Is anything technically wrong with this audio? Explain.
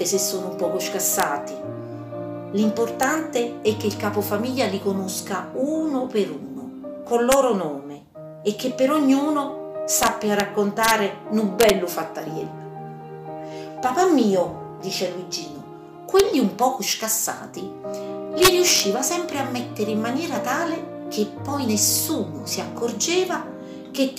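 Yes. The audio has integer overflow at eight points: 1.20–1.23 s, 3.03 s, 7.32–7.34 s, 10.03–10.40 s, 10.84–10.91 s, 11.61–11.70 s, 16.19 s and 18.43–18.80 s. Loud peaks went past the largest integer value by about 0 to 4 dB. They were not held at the limit. They wrapped to the opposite sign instead. Each event is a harsh, violent crack, sharper than clipping.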